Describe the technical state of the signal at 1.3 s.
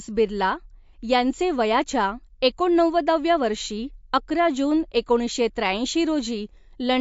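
At 1.3 s, as throughout the clip, the speech carries likely MP3 compression at a low bitrate, around 50 kbps. Starved of bits, the encoder removes everything above 7.6 kHz and drops weak frequency lines, leaving dull, watery, swirling speech with smeared consonants.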